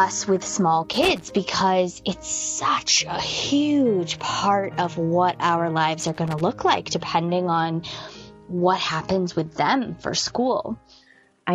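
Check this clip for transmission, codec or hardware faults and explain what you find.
Two kinds of fault are present: loose connector crackle, which occurs twice, and a sudden drop to a lower-bitrate stream near the end.

Loose connector crackle, from 0.93 to 1.31 s and again from 6.00 to 6.41 s: each is an irregular burst of scratchy crackle lasting under half a second. A worn or dirty contact is making and breaking as it shifts, chopping the signal and adding pops from any DC on the line.

Adaptive stream at a lower bitrate, from 7.33 s to the end: the treble dulls abruptly, with nothing above 11.1 kHz, and codec artefacts thicken, without any gap. The player switched to a lower-bitrate version as the connection slowed, which fits a move from 128 to 48 kbit/s MP3.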